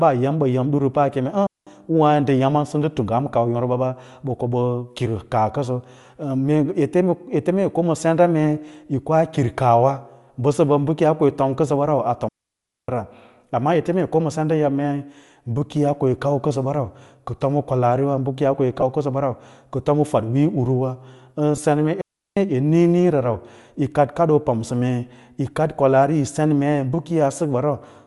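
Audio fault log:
Throughout, Bluetooth LC3 compression: the speech carries a plainly audible breathy, grainy edge, likely from LC3 coding at a modest rate, which fits around 48 kbps with 7.5 ms frames. The codec discards much of the upper spectrum and fills the gaps with shaped noise, so sibilants and consonants sound rough rather than crisp. On a spectrogram the high band looks speckled and patchy instead of continuous, with blocky texture changing every few milliseconds.
1.47 to 1.67 s, 12.28 to 12.89 s and 22.01 to 22.37 s, digital wireless dropout: the sound cuts to near silence for about 0.2 s, 0.6 s and 0.35 s. Each time the receiver lost too much data and muted with a very brief fade, leaving clean holes with no noise burst on either side. A waveform shows flat gaps bounded by short tapers, and a spectrogram shows empty vertical bands across all frequencies.
18.81 to 18.83 s and 21.56 to 21.58 s, lost LE Audio frames: about 15 ms of signal each time, consistent with two lost 7.5 ms frames, is replaced by a brief noisy smear. 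The decoder repeated the last spectrum with randomised signs, so the energy stays roughly right but the harmonic structure collapses. On a spectrogram, harmonic striations blur into a short noise-like smudge, and the waveform loses its periodic shape for those milliseconds.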